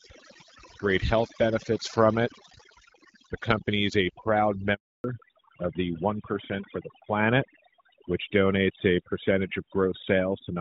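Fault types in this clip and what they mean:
Overdone noise removal: a noise reducer pushed too hard strips individual frequency bands whenever they sit close to its noise estimate, so the background between phrases falls to near silence with small twinkling specks, and the quieter parts of the speech are eaten along with it. It runs through the whole clip. Unlike a simple band limit, the damage flickers from moment to moment rather than cutting a fixed range.
Handover gap: the call switched networks and no speech arrived during the changeover, so right after "company is a proud" the sound fades out within a few tens of milliseconds and stays silent from 4.74 to 5.04 s, a 300 ms hole. Whatever was said in that span is simply lost. It differs from packet-loss concealment because nothing is filled in, and the sound after it comes back changed.
Fallback to narrowband: from 5.04 s to the end the call drops from HD Voice to an older narrowband codec, which fits a move from AMR-WB at 12.65 kbit/s to AMR-NB at 12.2 kbit/s. 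Nothing above 4 kHz survives, so the speech turns duller and rougher at that point, while the earlier part, coded lightly by the wideband codec, keeps its higher band. A steady muffling from a poor microphone would not switch on at one moment like this.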